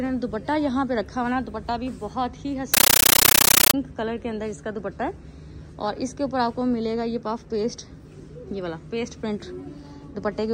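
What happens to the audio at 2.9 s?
At 2.9 s the sound is replaced by a compressed stream played as audio, lasting from 2.74 to 3.74 s. Encoded data is being treated as ordinary samples and left undecoded, so each frame comes out as a 13.3 ms blast of noise followed by silent padding, 31.25 times a second, which points to a Dolby Digital (AC-3) stream. It is very loud, chattering static. Unlike random digital noise, it has a steady, machine-like pulse.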